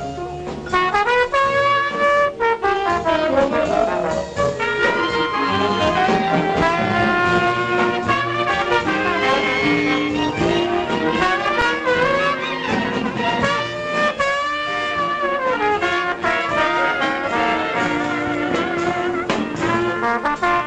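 At 11.61 s there's an underrun with held sample: the buffer ran dry, output froze flat for 5 ms, with that audio gone.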